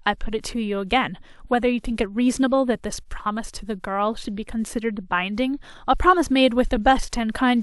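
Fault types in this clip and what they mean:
No faults can be heard anywhere in the speech.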